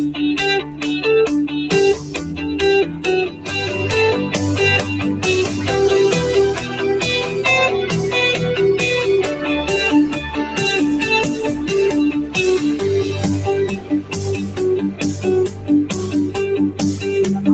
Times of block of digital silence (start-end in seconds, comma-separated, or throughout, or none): none